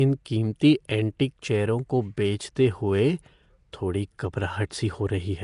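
Nellymoser compression runs through the whole clip. The speech carries a rough, hissy halo and a smeared, underwater quality, with nothing above 10.6 kHz. This likely comes from coarse block coding that starves weak bands and fills them with noise, consistent with a bitrate around 44 kbps.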